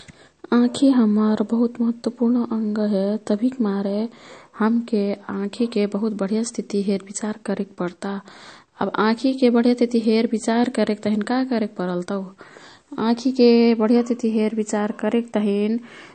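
Speech runs the full length of the clip with MP3 compression damage that is plainly audible throughout, likely from a low-bitrate encode around 40 kbps. Nothing survives above about 8.6 kHz, so sibilants sound dull and clipped. Weak spectral detail flickers in and out between frames, giving a watery, swirly quality. On a spectrogram this shows as a hard flat ceiling near 8.6 kHz and patchy, blinking energy in the upper bands.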